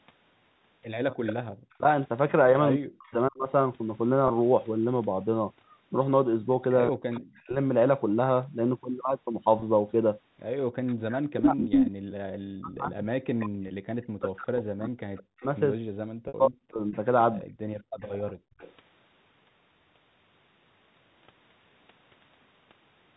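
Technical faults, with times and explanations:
1.25 to 3.12 s, 7.14 to 7.41 s, 10.87 to 13.48 s and 16.93 to 18.73 s, echo leak. A delayed copy of the sound comes back behind the original. The delays are 157, 179, 200 and 224 ms. The copy sits about 10 dB below the direct sound in the first run, about 35 dB below in the second, about as loud in the third and about 20 dB below in the last. The likely cause is an echo canceller on a loudspeaker side that let part of its microphone pickup through.
1.43 to 1.50 s and 17.82 to 18.59 s, background gated by the echo canceller. The room sound falls away sharply and then returns. The first dip lasts 70 ms and reaches about 39 dB. The second spans about 0.4 s and drops about 40 dB. Both times the canceller clamped the microphone while the loudspeaker played, then released it. The result is a brief hole in the ambience rather than a fade.
1.78 to 3.48 s, 6.89 to 7.56 s and 10.91 to 17.5 s, speech suppressed in double talk. 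The talker's voice sinks, thins or breaks into pieces while the far side's sound is playing on the loudspeaker. The drops reach about 40 dB. Roughly 0.7 s is affected in each of the first two stretches, and around 5 s in the long third one. The likely cause is the echo canceller failing to separate local speech from echo and turning both down.
4.28 s, 9.60 s, 13.68 s and 16.28 to 16.34 s, packet loss with pitch repetition. Each of the first three is a 20 ms gap, which fits a single lost packet. The receiver filled each one by repeating the last pitch period, so it sounds like a tiny held, buzzy note. The last gap is 60 ms, about three packets' worth. There the repeated period fades down, and the speech cross-fades back in.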